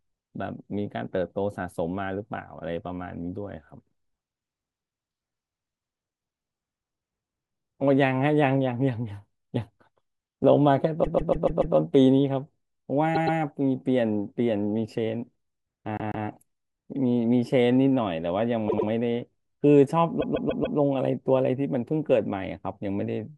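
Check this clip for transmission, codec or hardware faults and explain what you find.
Yes, there is one codec or transmission fault: repeated frames, occurring five times from 11 s onward in the speech.

Repeated frames at 11.03–11.75 s, 13.14–13.38 s, 15.97–16.26 s, 18.69–18.88 s and 20.20–20.77 s. A short run of compressed frames was delivered more than once, so the decoder replays the same slice of audio. Each burst is a stutter. The looped blocks are 144 ms, 120 ms, 144 ms, 96 ms and 144 ms long, which fits runs of four to six frames of about 24 ms each. The first block plays five extra times, adding 720 ms, and the last plays four extra times, adding 576 ms. The other three repeat twice, adding 240 ms, 288 ms and 192 ms.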